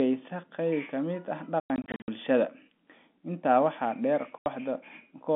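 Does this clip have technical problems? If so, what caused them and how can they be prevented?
Yes. The speech is chopped by abrupt silent holes with hard edges. Between 1.60 and 2.08 s, about 280 ms of sound drops out in scattered gaps, the longest about 100 ms. A single 80 ms hole follows at 4.38 to 4.46 s. This is packet loss filled with silence: lost packets were replaced with nothing, and the gap sizes fit 20 ms packets. The narrow 200 Hz to 3.5 kHz telephone band comes from the G.711 line. Prevention: use a jitter buffer with packet-loss concealment, or add forward error correction, so missing packets are reconstructed rather than silenced.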